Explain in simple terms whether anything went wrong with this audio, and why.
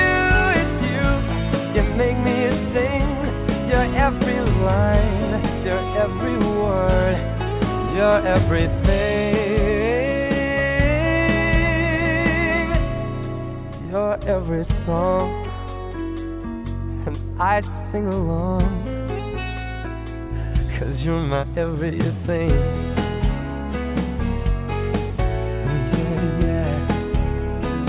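Nothing went wrong with this audio. There is no moment where a fault can be heard, so there is nothing to explain or fix.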